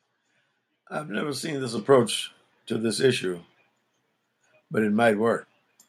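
A speech clip with a microphone volume step-up at 1.77 s, just after "have never seen this": voice and background jump about 7 dB together as the input gain is raised in one step.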